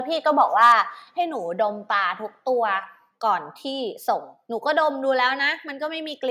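Microphone overload from 0.41 to 0.72 s: the speech peaks run about 3 dB past the converter's limit, likely from excessive input gain, so their flattened tops crackle harshly.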